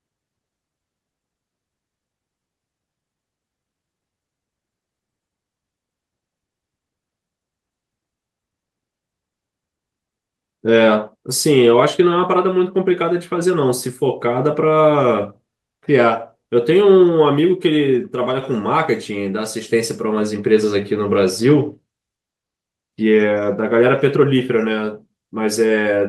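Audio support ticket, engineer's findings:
Skip ahead at 2.63–2.65 s. Speech jumps forward with no fill, roughly a second of audio missing. Jitter buffer likely overflowed and discarded a queued stretch. The two sides are spliced almost directly, cutting delay by about a second.

Jitter buffer speed-up, 2.73–4.02 s. Speech runs at 114% speed, same pitch, sounding hurried. Receiver trimmed short pitch-period pieces repeatedly to drain excess buffered audio. About a fifth of a second removed in total.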